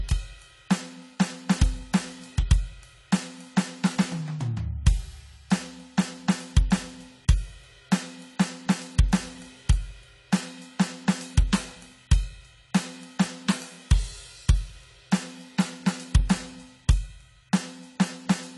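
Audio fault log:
Throughout, AAC compression: nothing above 11.5 kHz, so the music sounds dull and smeared. It fits low-bitrate AAC-LC, likely near 32 kbps, cutting the top and coarsely quantising the rest.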